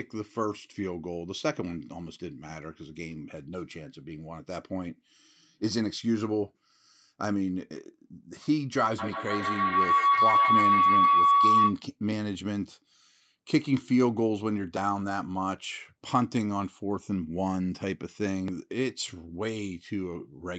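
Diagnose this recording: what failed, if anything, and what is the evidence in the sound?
Feedback howl at the acoustic stage, from 8.98 to 11.84 s: a loudspeaker-to-microphone loop with gain above unity makes the repeats grow into a tone near 1 kHz, repeating roughly every 150 ms and peaking about 7 dB above the speech. A spectrogram shows a bright, thickening horizontal line.

Dropped buffer (overrun) at the driver or buffer stage: a small forward jump at 14.77 s and 18.48 s, each losing around 20 ms, likely from samples overwritten before they were read. The waveform shows an abrupt discontinuity without any silent gap, and the spectrogram a thin vertical broadband stripe.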